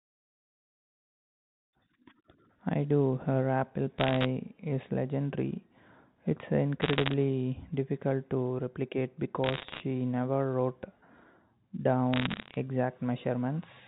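Bit errors on a digital phone line cause bursts of sharp ticking crackle at 3.98–4.26 s, 6.82–7.14 s, 9.44–9.80 s and 12.13–12.55 s. Flipped bits corrupt single samples of the G.711 mu-law signal, with an error rate of about 0.7 percent, rising to 1.0 percent in the third burst.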